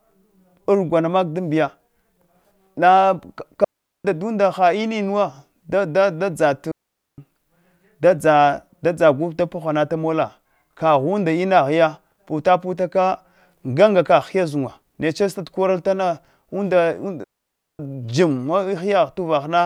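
Digital wireless dropouts at 3.64–4.05 s (just before "ha innuwa"), 6.72–7.18 s and 17.24–17.79 s: the receiver mutes the lost data with a fast fade, leaving clean holes of near silence, 0.40–0.55 s long, without noise bursts.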